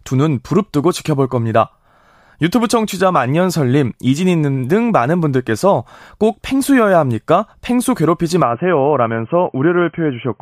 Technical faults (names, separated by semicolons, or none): input switched to a poorer device